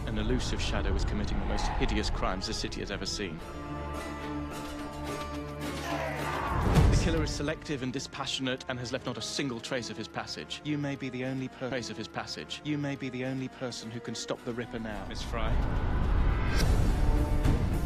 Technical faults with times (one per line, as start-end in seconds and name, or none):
11.71-13.71 stream segment repeated